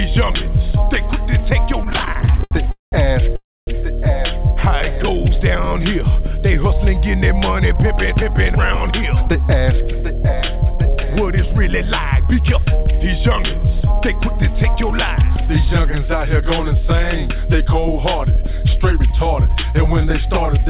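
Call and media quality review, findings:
Repeated stalls (stutter), 1.84–2.53 s: 16 short stalls, longest 80 ms, 271 ms of held-over sound, about 39% of the span. Jitter buffer repeatedly ran dry as packets arrived late; receiver extended the last sound each time. Dragging, stuttering audio, nothing lost.

Call audio freeze, 2.71–2.94 s: 210 ms hold, last sound decays into about 150 ms of silence, then resumes where it stopped. Likely packets delayed in transit, emptying the jitter buffer; playout delay grows by 210 ms.

Call audio freeze, 3.36–3.69 s: same pattern, 310 ms gap, roughly 250 ms of it silent, delay up another 310 ms. Nothing missing.

Jitter buffer slow-down, 4.80–6.04 s: audio runs at 95% speed, pitch unchanged, 66 ms added. Buffer rebuilding reserve by repeating single pitch periods and pause fragments. Drawn-out sounds.

Jitter buffer speed-up, 7.97–12.41 s: 104% speed, about 0.2 s cut. 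Buffer over target; short pitch-period chunks dropped repeatedly. Same pitch.

Jitter buffer speed-up, 18.36–20.63 s: 103% speed, roughly 70 ms removed, same mechanism. All of it passes through a narrowband path with nothing above 4 kHz, consistent with G.711 mu-law at 64 kbps.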